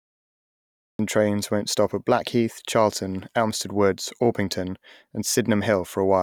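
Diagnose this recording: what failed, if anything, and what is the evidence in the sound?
The recording has a cut-off start, a failure at the capture or storage stage where the take began late. The first 0.99 s is flat digital silence, and at 0.99 s the speech enters mid-sound, just ahead of "trains won't stop at". With no natural attack or fade-in, the waveform jumps from a silent line straight into the speech. On a spectrogram, a blank region ends in a hard vertical edge at 0.99 s.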